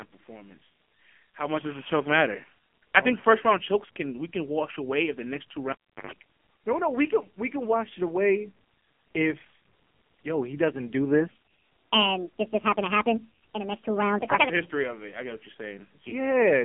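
It's a speech clip that has been through the AMR narrowband mobile codec the whole way, and hard: the line sits in a 200 to 3400 Hz band with nothing above 3.4 kHz. The heavy buzzy, synthetic quality points to one of AMR-NB's low modes, around 5.9 kbps, where the few pulses per subframe just can't carry the voice cleanly. At 5.72 s, right after "if the next two", you get what sounds like the cable pulled and plugged in. There's a pop, then the feed drops out for about 0.35 s. A roughly 0.12 s burst of 50 Hz mains buzz comes through while the connector is only half seated, and a second pop lands as the sound comes back at 6.11 s. Then from 11.31 s to 14.49 s, just after "yo he doesn't do", there's a section at the wrong speed. It runs 1.55 times too fast, so pitch and tempo jump together, the voice goes high and rushed by something like seven semitones, and it drops back to normal at the end. 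That's likely a player or edit stage running that chunk against the wrong clock rate.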